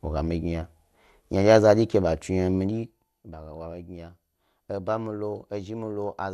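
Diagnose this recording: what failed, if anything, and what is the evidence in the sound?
The speech is dull and carries a gurgling, granular roughness from start to finish, with nothing above 12.2 kHz. That points to the codec stage, likely MP2 compression at a low bitrate, which fits roughly 80 kbps. Starved of bits, Layer II switches off its upper sub-bands and coarsely quantises the rest, so the top flickers and the remainder turns grainy. A plain low-pass filter would dull the sound without the granular texture.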